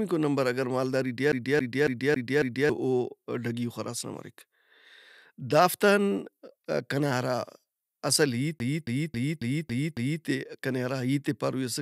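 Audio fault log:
1.32–2.70 s: CD stuck on one turn. Just after "مالداری ٹی", a 275 ms slice of the speech plays five times in a row, each pass separated by a brief mute where the pickup jumps back a track, producing a rapid, even stutter.
8.59–10.24 s: CD stuck on one turn. The same 275 ms loop length recurs, now six repeats, consistent with one surface scratch catching the laser at the same point on every rotation.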